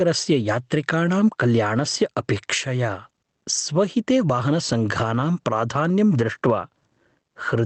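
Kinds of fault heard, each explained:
Gain pumping: The level swings by around 15 dB, bringing loud and soft parts closer together and leaving the speech squashed and flat in level. The likely cause is gain set far too high, with a fast limiter clamping down on each peak.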